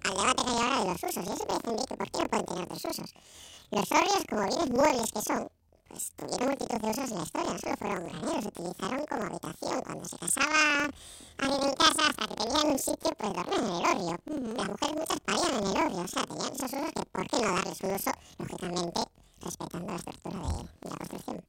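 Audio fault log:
Throughout: planar audio read as interleaved. Each 46.44 ms block plays twice at double speed, left then right, so the speech sits an octave up with a 21.5 Hz flutter.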